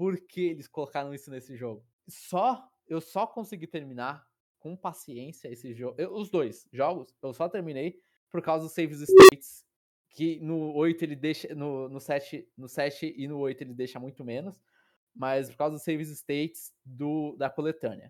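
At 9.09 s the speech is interrupted by an unstable filter: a recursive filter's feedback has run away, so a tone around 400 Hz swells over about 203 ms into a loud squeal, hits clipping, then overflows and drops out for about 30 ms before recovering at 9.32 s. On a waveform this is a rapidly widening envelope flattened at the clipping limit, then a brief flat gap. A spectrogram shows a single bright horizontal band that intensifies before going dark.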